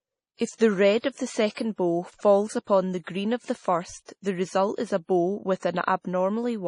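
MP3 compression runs through the whole clip: the speech has nothing above 10.5 kHz and carries heavy codec damage, which fits a low bitrate around 32 kbps. The cause is likely an MP3 encoder starved of bits. It removes the treble above a fixed cut-off and discards quieter spectral detail, so the speech sounds dull and watery, with swirling, chirpy texture on hissing consonants, where the weaker frequency components flicker in and out between frames.

Pre-echo appears from 1.00 to 1.04 s, spreading about 35 ms ahead of a sharp onset. Because the codec spreads its coding noise across an entire transform block, noise sized for the loud attack also fills the near-silence just before it. The result is a brief smear of hiss arriving before the attack itself, and the onset loses its crispness and sounds softened.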